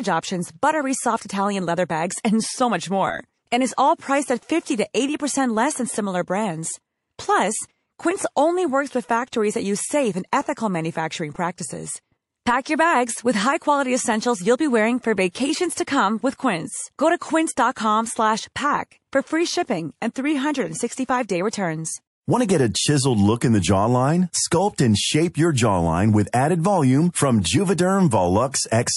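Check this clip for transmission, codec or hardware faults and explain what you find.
Two faults stand out in the speech. Throughout, there's a watery, swirly quality, most likely MP3 compression at a low rate, roughly 48 kbps.

Pre-echo shows up at 3.76, 12.64, 15.32, 17.19, 20.14, 21.51, 27.42 and 28.51 s. The encoder kept its 48 ms long blocks on sharp onsets, so noise rises about 12 to 19 dB for 16 to 29 ms ahead of each attack. It sounds like a brief hiss before the attack, which then comes out softened.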